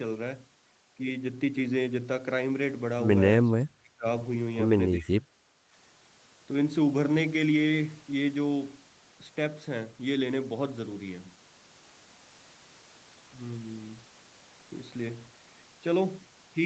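From 3.48 to 4.06 s, and again from 4.97 to 5.43 s, the speech sinks by roughly 30 dB, each time for about half a second. That's most likely speech suppressed in double talk: the far end was talking over this side, and the echo canceller couldn't tell the local talker from loudspeaker echo, so it clamped down on everything. Through the Opus call path, the audio tops out around 8 kHz.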